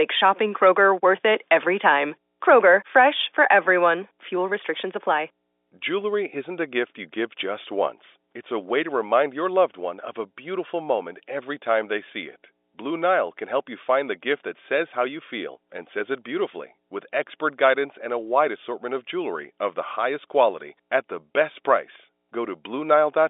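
Mains hum runs through the whole speech clip. It is a steady low tone at 60 Hz. It sits well below the voice, about 35 dB down. A ground loop or a nearby transformer has let the power line couple into the signal.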